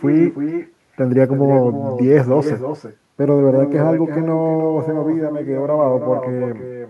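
Speech, and the whole clip is dogged by echo with no canceller. Every phrase comes back a little under a third of a second later as a quieter, thinner copy, sitting about 8 dB below the original. That's the far end playing the call through a loudspeaker, its microphone catching it, and nothing stripping it out, so the talker's own voice returns after the network round trip for the full length of the recording.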